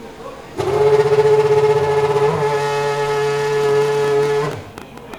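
From 3.64 s to 5.15 s a train of clicks runs over the sound: around fifteen similar pulses at about 10.7 per second, unevenly spaced, peaking a few decibels above the signal. They are audible as ragged ticking, with likely interference from nearby equipment or a faulty connection or power supply.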